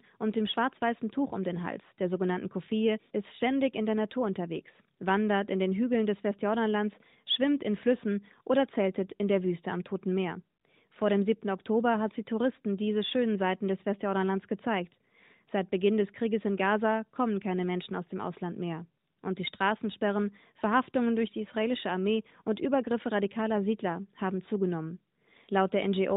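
No technical faults can be heard in this speech.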